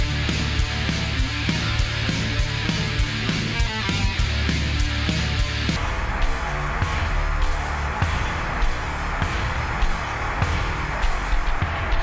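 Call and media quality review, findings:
Wrong sample rate from 5.76 s to end: playback clock running at half the recorded rate with no resampling, consistent with 32 kHz material output at 16 kHz. Sound slows to 0.5x speed and drops 12 semitones, a full octave, heavy and dragging.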